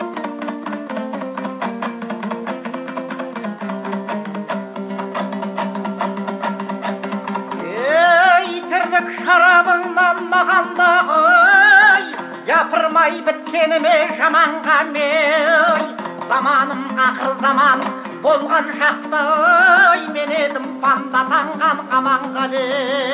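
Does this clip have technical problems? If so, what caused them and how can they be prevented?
No, there are no technical problems in this clip.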